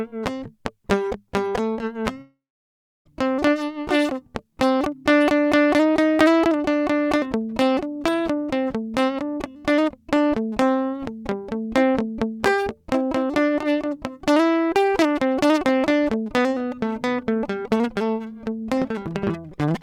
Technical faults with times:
2.21-3.07 long network dropout

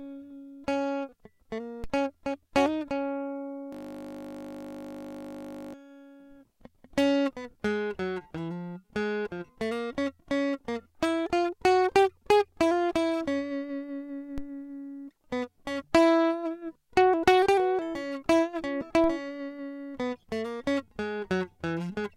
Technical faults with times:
1.84 DC step
3.73-5.74 system hang loop
14.38 DC step
19.04 DC step

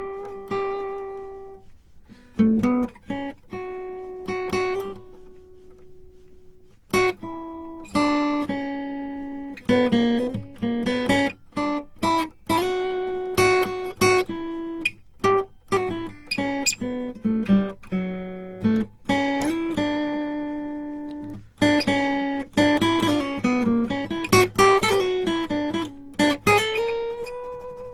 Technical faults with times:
0.00-27.93 generation loss

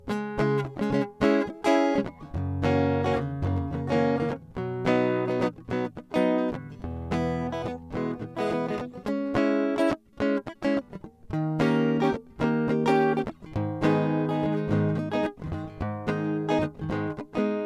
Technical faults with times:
none

